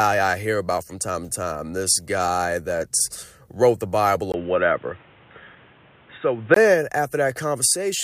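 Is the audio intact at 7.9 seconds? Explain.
Yes, the speech at 7.9 seconds plays through cleanly with no audible fault.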